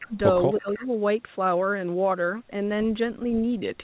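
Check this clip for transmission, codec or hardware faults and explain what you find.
Two kinds of call-processing fault are audible, both within the first second, on speech that is band-limited to 4 kHz, which fits a narrowband G.711 call path.

Speech suppressed in double talk, from 0.00 to 0.17 s and again from 0.61 to 0.89 s. The speech dips sharply, by about 20 dB at first and about 15 dB later, because an echo canceller likely mistook simultaneous talk for loudspeaker echo and turned the near talker down.

Echo leak, from 0.56 to 0.87 s. A faint, delayed copy of the speech trails the original by 316 ms, roughly 20 dB below it, as the loudspeaker echo likely slipped past incomplete cancellation and was sent back.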